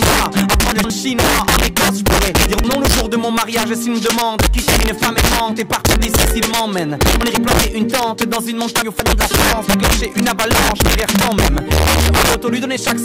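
Throughout, gain is pushed about 4 dB past the integer limit with no clamping, so a small share of peaks wrap to the opposite sign. This integer overflow sounds like violent cracks on loud passages. At 0.72 to 0.9 s, 2.46 to 2.64 s and 8.82 to 9.06 s, a 60 ms chunk plays two, two, then three chunks late. These chunks out of order cause brief jumbled moments.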